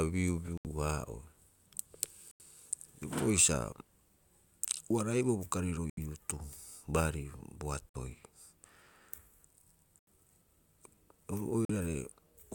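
At 0.58, 2.31, 5.90, 7.89, 9.99 and 11.65 s the speech drops to silence for roughly 40 to 90 ms, then resumes. These are most likely Bluetooth stalls: the headphones' buffer ran dry while delayed packets were resent. Unlike a recording dropout or lost packets, which skip material, each gap here is pure silence inserted into the stream before the speech picks up where it halted.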